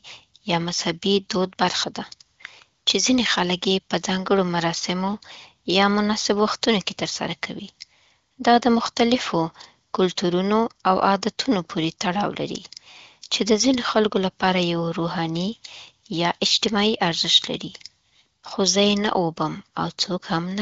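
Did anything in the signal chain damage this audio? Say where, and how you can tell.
No, nothing in the chain damaged this speech. It has passed through the AMR wideband (HD Voice) codec, and the absence of anything above about 7.5 kHz with at most faint coding roughness suggests a high rate around 18.25 kbit/s.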